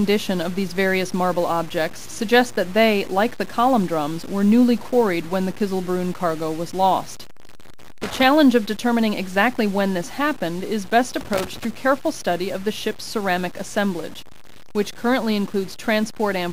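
At 8.02 s there's a burst of loose connector crackle running to 8.23 s, then another from 11.21 to 11.65 s. A worn or dirty contact is making and breaking as it shifts, chopping the signal into an irregular, scratchy crackle.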